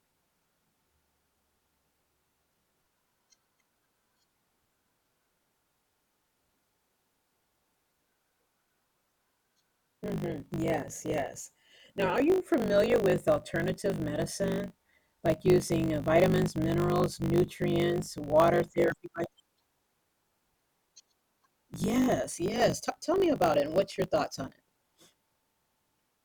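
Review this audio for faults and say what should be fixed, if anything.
There's a block size mismatch (truncated) running the whole way through this speech. You can hear a steady 50 Hz buzz, and the talking runs about 1.16 times faster than it should while the timbre stays the same. One stage is writing longer blocks than the next one reads, which fits 1024-sample blocks, so the tail of every block gets dropped. Each cut leaves a small seam, and those seams make the buzz. Make sure both stages agree on the block size, or put a proper buffer between them so nothing gets discarded.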